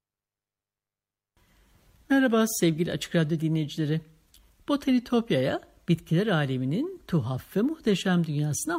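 Listening to the speech recording, nothing stood out as a technical problem at any point.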